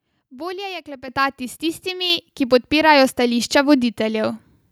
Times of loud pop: none

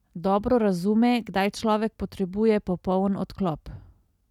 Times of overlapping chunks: none

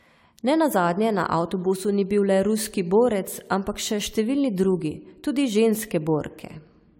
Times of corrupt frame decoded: none

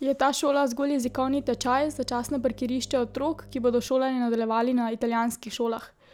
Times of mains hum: 1.04-3.88

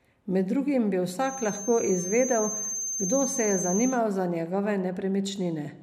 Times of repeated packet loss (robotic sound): none

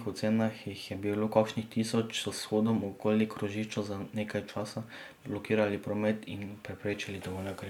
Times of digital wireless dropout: none

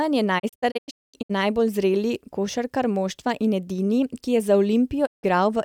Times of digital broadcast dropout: 0.38-1.31, 5.05-5.25

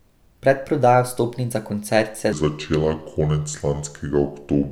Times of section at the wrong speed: 2.33-4.72

